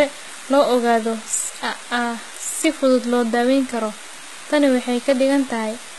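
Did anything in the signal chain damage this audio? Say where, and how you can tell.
Yes, at the codec stage. Throughout the speech, the s sounds come out gritty and metallic, and nothing sits above 11.8 kHz. That's likely HE-AAC compression at a very low rate, around 16 kbps. The treble is rebuilt from copied lower bands, so its harmonics don't line up.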